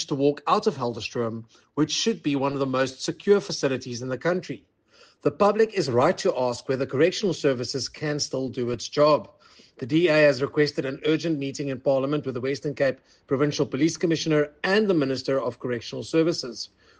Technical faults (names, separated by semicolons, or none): none